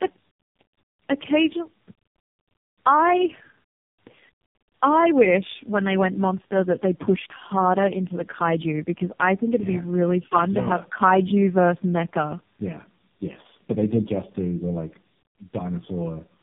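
Speech that has been through tandem speech coding for its whole length: the sound has been decoded and re-encoded across several links, with the rough, warbly texture pointing to about four lossy speech codecs in a row, most likely ending in low-rate AMR-NB. Each stage codes the previous stage's errors as if they were signal, so roughness, muffling and a watery warble build up. Nothing is present above 3.7 kHz, giving a narrowband telephone sound.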